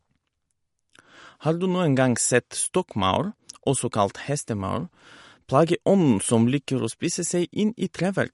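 Throughout the speech, nothing is present above 11.2 kHz and coding damage is plainly audible, most likely from MP3 compression at a low bitrate, which fits roughly 48 kbps. Short of bits, the encoder cut the treble at a fixed frequency and discarded weaker spectral detail.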